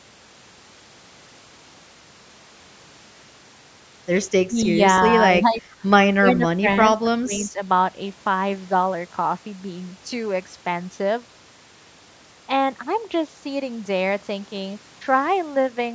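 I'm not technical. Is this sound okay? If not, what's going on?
No. This is likely speech suppressed in double talk: both sides of the call spoke at once, and the echo canceller turned this talker down along with the echo. The voice dips or partly drops out at 4.48–4.57, 5.41–5.6, 6.2–6.66 and 7.04–7.59 seconds, most noticeably around 6.2 seconds and least around 5.41.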